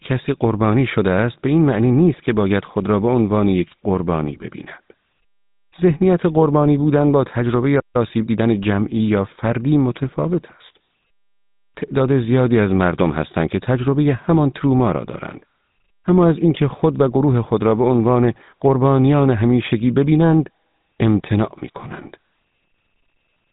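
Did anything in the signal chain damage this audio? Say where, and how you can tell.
Yes. At the codec stage the whole clip has been through a GSM full-rate codec. It models the vocal tract and drives it with a sparse, regularly spaced pulse excitation, which fits its 13 kbps rate. That gives the speech a plainly audible buzzy, gravelly roughness from start to finish. The spectrum stops dead at about 3.8 kHz, so sibilants and breath detail are gone and consonants sound dull and coarse.

At the playback stage there is a playback stall from 7.79 to 7.96 s. The output goes silent in mid-flow for about 0.15 s, and the speech then resumes without anything being repeated. The likely cause is the player running short of buffered data or its audio thread being blocked, so it had nothing to hand the output device until it recovered.

Also at the playback stage, time-compressed catch-up follows from 7.96 to 8.54 s. 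The player works off the backlog left by the stall by cutting out small segments and cross-fading across the joins. The speech runs at about 1.25 times normal speed there, sounding hurried but at its normal pitch.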